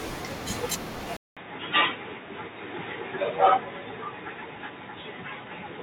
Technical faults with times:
1.17-5.82 input switched to a poorer device

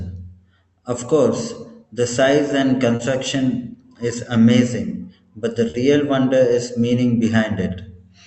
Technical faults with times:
2.95-3.11 short concealed packet loss
5.70-5.76 short concealed packet loss

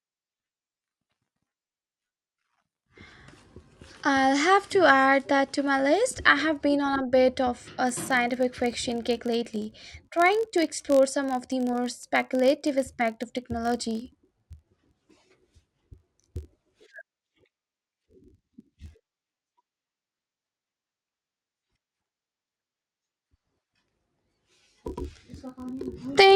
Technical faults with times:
7.87-26.36 filter restarted on every block

